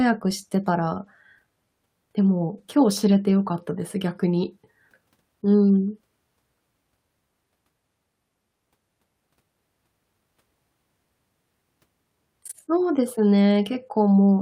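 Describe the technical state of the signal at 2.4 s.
From 2.43 s to 3.61 s a call bitrate drop makes the speech muffled and watery. Starved of bits, the encoder codes coarsely and trims the highs, which fits a fall from 64 to about 21 kbps. Unlike packet loss, nothing drops out.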